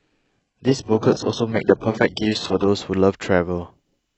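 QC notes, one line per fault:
0.00–2.68 s, adaptive stream starting at a low bitrate: the player opened on a starved rendition, fitting HE-AAC near 8 kbit/s, so treble is synthetic and artefact-laden. At 2.68 s it steps up, consistent with AAC-LC near 96 kbit/s, and clarity jumps without a gap.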